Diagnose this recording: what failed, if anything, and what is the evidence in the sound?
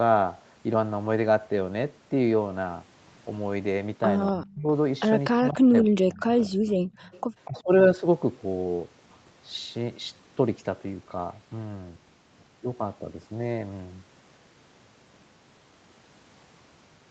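Faint, delayed copies of the speech appear at 4.27–4.31 s, 7.01–7.21 s and 7.45–7.63 s. They trail by 243 ms and sit about 25 to 30 dB below the main signal. This echo leak likely comes from the call-processing echo canceller failing to remove a loudspeaker's pickup.

The speech dips sharply or breaks up at 4.32–4.68 s, 5.36–6.24 s and 6.49–6.74 s, losing roughly 30 to 40 dB, and dips more gently at 7.47–7.67 s. This is speech suppressed in double talk. The echo canceller, likely confused by overlapping talk, attenuated the wanted speech along with the echo.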